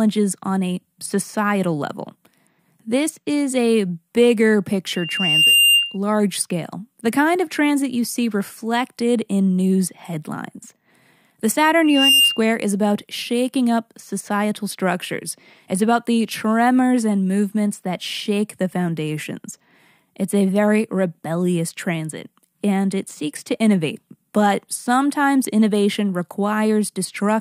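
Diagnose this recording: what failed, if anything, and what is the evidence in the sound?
Loudspeaker feedback squeal, 4.95 to 5.97 s (after "is a bigger", before "scale the kind of") and 11.84 to 12.42 s (before "is about shaking up"), arises in the acoustic and analogue loop between microphone and loudspeaker. A steady 2.8 kHz tone swells over most of a second, then over a fraction of a second, and peaks somewhat above the speech. The microphone is hearing its own loudspeaker, and at 2.8 kHz the loop gain passes one, so that frequency keeps growing.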